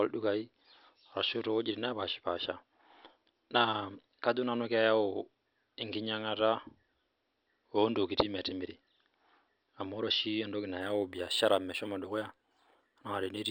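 From 10.81 s to the end at 13.50 s, sibilants take on a light metallic shimmer and the top of the band sounds dulled. This is imaging from linear upsampling: the rate appears to have been raised by joining samples with straight lines, which fits a rise from 12 kHz to 48 kHz. That crude interpolation rolls off the upper band and leaves a mirrored copy of the spectrum between 6 kHz and 12 kHz, around 20 dB below the speech.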